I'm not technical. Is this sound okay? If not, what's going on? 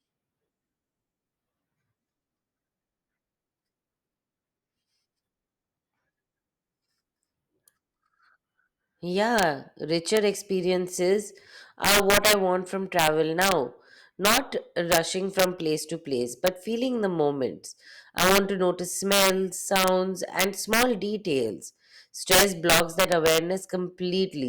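No. The speech has integer overflow throughout: the loudest peaks push past the largest number the audio can hold, so instead of being capped they wrap around to the opposite extreme. Only a small fraction of moments are affected, but each produces a violent crack, much harsher than ordinary distortion.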